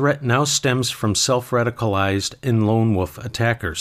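No technical faults are audible.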